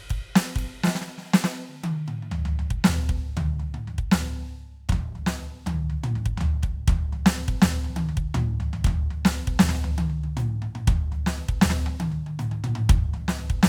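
A music clip with no audible technical faults.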